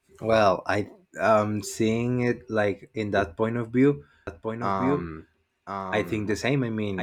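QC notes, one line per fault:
4.27 s to the end: doubled audio track. The speech is joined by a second full-band copy trailing about a second behind and around 5 dB quieter, dry with no decay and starting abruptly, likely from a slower capture path recording the same signal again.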